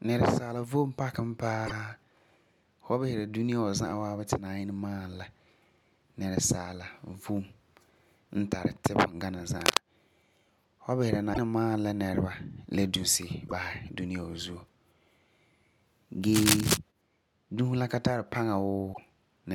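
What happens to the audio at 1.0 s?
Nothing goes wrong at 1.0 s; the speech carries on intact through that moment, with no dropout, click, distortion or other fault.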